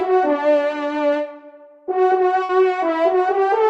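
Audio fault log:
2.43 to 2.51 s, burst of packet loss: a run of consecutive packets went missing in the call stream, so the receiver filled the hole by continuing the last sound it had and fading it down. That concealment accounts for about 54 ms of held, decaying tail, and about 60 ms of the original audio never arrives, so playback resumes slightly further on with a small jump. The band-limited call codec underneath, which tops out near 12 kHz, fits an Opus path.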